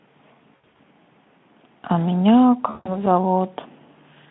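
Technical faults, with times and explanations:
0.55 to 0.81 s and 2.69 to 3.05 s, VoIP packet loss concealed by the speech codec. About 180 ms goes missing in scattered gaps, the longest 80 ms, then 160 ms more. The Speex decoder repeats its last pitch and filter, so speech smears into a fading buzz or coloured noise and stays weak briefly afterwards.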